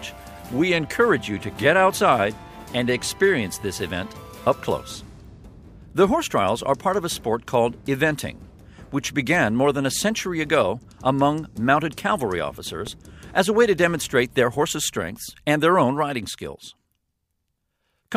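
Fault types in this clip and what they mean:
Loud pop: A sudden electrical pulse, likely from a plug being seated, a switch, a static discharge or a driver glitch, was added to the signal path, and the circuits after it shaped it into a brief spike. In this clip it comes through as a single sharp pop from 12.87 to 12.89 s. It peaks a few decibels above the surrounding sound, which carries on uninterrupted underneath it.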